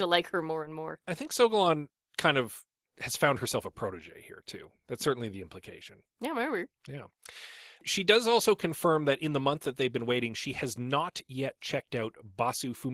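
From start to finish, Opus voice compression is starved of bits, which fits a rate near 16 kbps. A linear-prediction coder carries the lower band and a thin transform layer covers the top, both with coarse excitation. The speech sounds plainly hoarse and slightly robotic.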